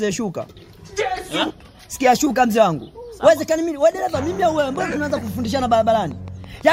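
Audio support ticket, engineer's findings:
Train of clicks, 4.60–6.62 s: about fifteen regular ticks at 5.96 per second, peaking near signal level. Likely nearby equipment interference or a faulty connection or power supply injecting pulses.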